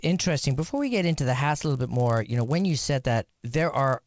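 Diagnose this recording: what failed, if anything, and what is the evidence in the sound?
The sample-rate conversion stage failed: the resampler restarted on every block. Throughout the speech runs a 100 Hz buzz, present only while sound is present, which points to 10 ms blocks each converted independently, likely from 44.1 kHz to 16 kHz. A spectrogram would show vertical lines every 10 ms, and the waveform small discontinuities at each block edge.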